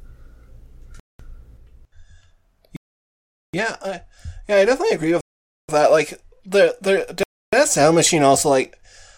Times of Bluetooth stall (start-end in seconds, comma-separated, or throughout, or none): 1.00-1.20, 2.76-3.54, 5.21-5.69, 7.23-7.53